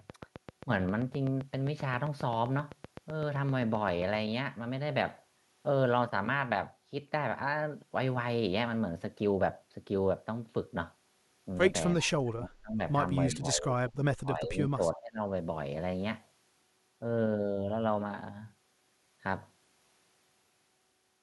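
A steady pulse, likely interference from nearby equipment or a faulty connection or power supply, produces a train of clicks from 0.10 to 4.16 s. About thirty similar clicks arrive at a regular 7.65 per second, peaking at about 10 dB above the speech, and are heard as even ticking over it.

From 11.94 to 12.80 s, speech is suppressed in double talk. The echo canceller likely could not separate the local talker from the loudspeaker echo and turned both down, so the voice dips by as much as about 30 dB for most of that stretch.

An echo leak follows from 13.30 to 13.36 s. Loudspeaker sound that was likely not fully cancelled returns as a brief, delayed scrap of voice, 338 ms late and roughly 20 dB below the speech. At 13.33 s the suppression returns. Until 15.23 s, double talk likely drives the canceller to attenuate again, and the voice drops by up to about 25 dB across roughly one and a half seconds.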